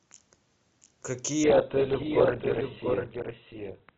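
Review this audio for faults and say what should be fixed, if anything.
Doubled audio track, throughout: a second full-band copy of the speech trails the original by roughly 0.7 s, about 5 dB quieter, with no decay or room colour. This likely comes from the same signal being captured twice, once through a slower path, or from two out-of-step copies left in an edit. To prevent it, route each source through only one capture path and check edits for overlapping duplicate regions.

Adaptive stream at a lower bitrate, from 1.44 s to the end: the quality drops suddenly with no gap. Nothing remains above 4.4 kHz, and codec artefacts rise, which fits a switch from a higher-rate Opus stream to one near 8 kbit/s after the connection slowed. To prevent it, record locally or give the stream enough bandwidth headroom that it never steps down to its lowest tier.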